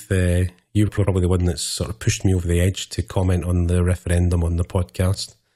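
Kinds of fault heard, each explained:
Frames out of order: from 0.88 to 1.07 s, two adjacent blocks of about 93 ms each play swapped, which fits two runs of four frames exchanged in decoding. The speech flutters, garbled; no time is lost.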